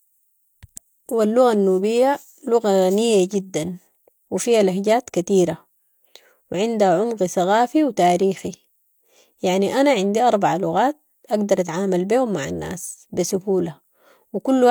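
A speech recording, with no technical faults to be heard anywhere in it. Nothing in the signal chain calls for comment.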